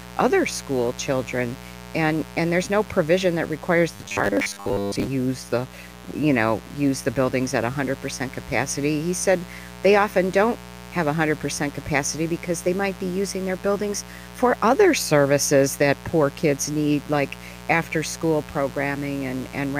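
A speech recording carries a steady mains buzz throughout, roughly 20 dB below the speech, with 60 Hz harmonics showing as evenly spaced horizontal lines reaching into the kilohertz range on a spectrogram. From 3.96 to 5.07 s, between "no provision that requires" and "the you know use", the speech turns into a metallic robotic sound with a fixed 100 Hz buzz, likely from repeated short buffers of about 10 ms covering most of that stretch, which the waveform shows as identical repeating cycles.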